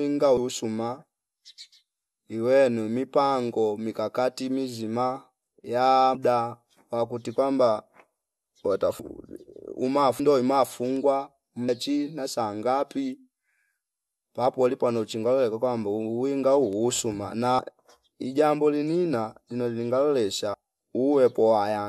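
Compressed frames are skipped at 0.37, 6.14, 8.99, 10.19, 17.58 (between "uwinga huu usuma" and "ijambo linina lino") and 20.54 s. Each time the speech jumps ahead by four to ten whole frames of about 26 ms, losing roughly a tenth to a third of a second. The lost frames are simply left out, so the sound doesn't fall silent. The overlapping frames meet in a brief smeared blip instead of a hard click, and the speech runs on with a piece missing.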